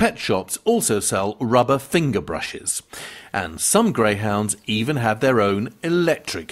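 Throughout the clip there is clock drift between sender and receiver: the sender's clock runs roughly one and a half percent slow, so the receiver's jitter buffer keeps draining. This is heard as a faint, uneven unsteadiness in timing, and a waveform shows no steady grid of event spacing.

From 0.04 s to 5.91 s, repeated timing corrections stretch the sound by repeating short pieces, playing it at about 99% speed and adding around a tenth of a second overall. On a spectrogram, small duplicated slivers and misaligned onsets appear at irregular intervals, heard as slight hiccups.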